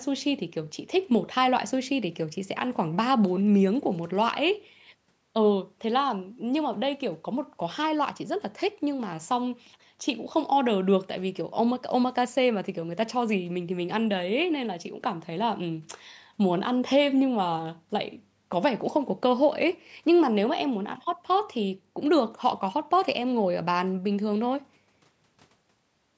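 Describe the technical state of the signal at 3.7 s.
At 3.7 s the speech is intact, with no dropout, distortion or other fault, only the normal band limit of call microphone processing, which leaves nothing above 8 kHz.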